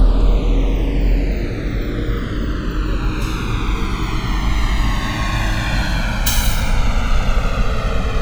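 The two channels drift apart from start to finish: they were captured on devices with separate clocks mismatched by roughly 150 ppm, so the inter-channel delay grows to around a millisecond and a half. Summed to mono, comb notches sweep slowly, producing a gradual flanging.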